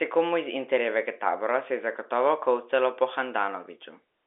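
No technical faults can be heard in this speech clip. It comes through as G.711 telephone coding, so the sound is held to the narrow line band of roughly 300 Hz to 3.6 kHz.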